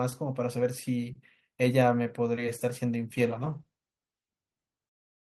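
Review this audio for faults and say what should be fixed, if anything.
There's a call bitrate drop starting at 3.15 s and running right to the end of the clip, so the last 2.1 s or so are affected. The encoder's rate falls from 32 kbps to 13 kbps, most likely because the call's bandwidth estimate dropped. At that rate Opus has to code the speech much more coarsely and trims the top end, so the voice turns rough and muffled. To prevent it, give the call steadier network headroom, or tune the bandwidth estimator so it doesn't cut the rate this hard.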